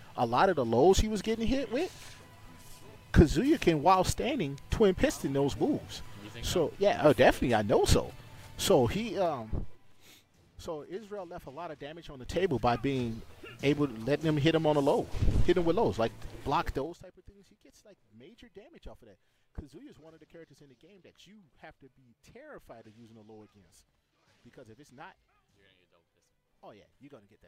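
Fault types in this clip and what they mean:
Zipper noise: gain moves in unsmoothed 3 dB jumps, so the level shifts near 9.0, 12.1 and 16.7 s carry a rapid ticking, zipping texture.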